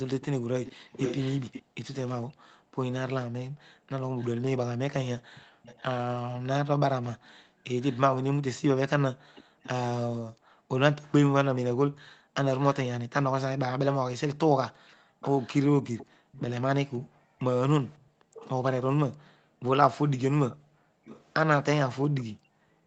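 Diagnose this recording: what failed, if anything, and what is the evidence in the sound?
The far end's echo canceller, in call processing, likely let loudspeaker pickup through its microphone. From 0.21 s to 22.23 s a faint delayed copy of the speech trails it by about 0.52 s, roughly 20 dB below the direct voice, sent back as an echo leak.

The same echo canceller, during loudspeaker playback, suppressed the microphone too hard, so the background is gated by the echo canceller. From 1.63 s to the end, the room tone dips and recovers, falling by as much as about 40 dB before returning once the canceller releases.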